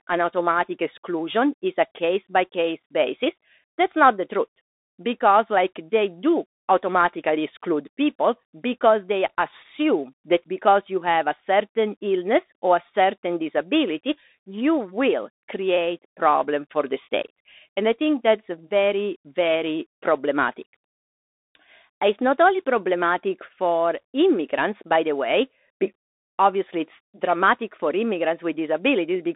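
From start to finish the speech passes through a Bluetooth CVSD headset codec, and the damage is plainly audible. The band runs from 250 Hz to 3.7 kHz, with nothing above 3.8 kHz. The one-bit delta coder's adaptive step lags sharp rises, so sibilants turn scratchy and a granular hiss sits under the speech, which fits a 64 kbps link. A clean telephone band-limit would dull the sound without that grainy, slope-overload roughness.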